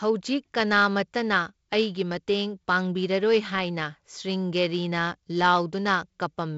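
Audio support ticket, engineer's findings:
No faults found on the speech path; the audio is band-limited at about 7.7 kHz with light coding noise, consistent with normal G.722 wideband telephone coding at 48 kbit/s.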